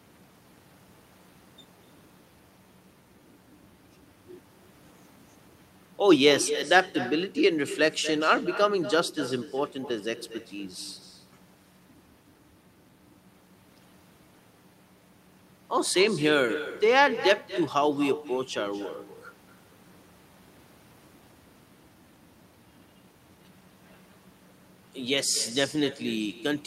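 Throughout the speech, echo with no canceller: the far end's loudspeaker feeds its microphone, returning each phrase about a fifth of a second later, roughly 13 dB quieter and thinner. Waveform and spectrogram show every syllable trailed by a fainter, delayed duplicate.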